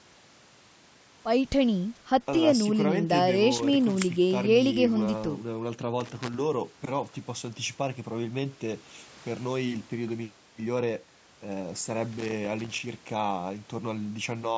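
Loose connector crackle hits this speech clip at 3.55–3.95 s, 6.00–6.35 s and 12.12–12.80 s: irregular bursts of scratchy crackle as a worn contact in the cable path makes and breaks, chopping the signal. The call microphone processing limits content to 8 kHz.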